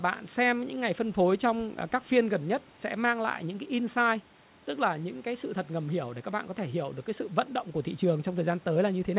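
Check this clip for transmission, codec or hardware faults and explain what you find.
Nothing here points to a transmission, codec or hardware problem; the sound simply carries the narrow top end of an ordinary phone-style call, with nothing above about 4 kHz, and the faint room noise sits about 32 dB below the speech.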